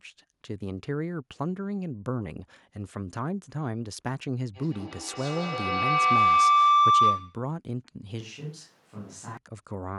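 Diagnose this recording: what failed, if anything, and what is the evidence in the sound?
A feedback howl, arising in the acoustic loop of the call rather than in any electronic stage, runs from 4.54 to 7.54 s. A tone near 1 kHz swells to about 11 dB above the speech and pulses roughly every 150 ms, the loop's round-trip delay. Steady interference would neither grow nor pulse.

From 8.21 to 9.37 s the sound turns abruptly roomy and hollow, with thinner bass, a level about 5 dB lower, and room noise only some 25 dB under the speech. The likely cause is a switch to a distant microphone at capture. The instant change in both directions rules out gradual reverb or gain drift.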